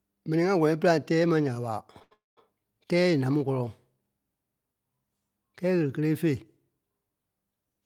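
Right after "tɛ́ɛ ma ya ɓa", from 2.03 to 2.13 s, a short stall from a late packet holds the last sound for 84 ms with a slight buzz or dip, with nothing lost. From 2.13 to 2.39 s a call audio freeze follows. It is longer, 238 ms, and unlike the stall the held sound fades into about 170 ms of silence. This likely came from packets delayed in transit, and again no speech is missing.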